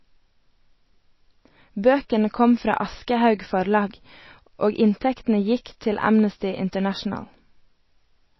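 From the start, the speech carries plainly audible MP3 compression: nothing remains above 5.8 kHz, and the watery, swirling texture and smeared consonants point to a low bitrate near 24 kbps, likely with the encoder dropping weak frequency lines as bits run short.

From 0.12 s to the end, a fast, soft rattle of clock slip clicks runs under the speech, with one-sample slips about every 20 ms, hundreds in total. This is likely two unsynchronised clocks differing by roughly 1000 ppm.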